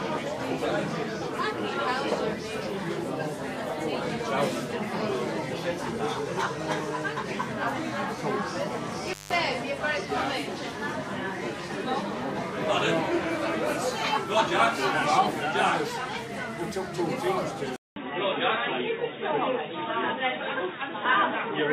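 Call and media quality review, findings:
Intermittent contact, 9.05–9.34 s: loose cable or plug opening momentarily, circuit broken for about 171 ms. Sound drops out abruptly with crackle at make and break, faint hiss across the gap, then returns at full level.

Input switched to a poorer device, 17.76 s to end: likely a mid-recording input change to a lower-grade microphone or headset profile. 200 ms silence at the switch, then sound band-limited, nothing above 3.8 kHz, so dull and boxy. New faint background noise well under the signal; overall level essentially unchanged.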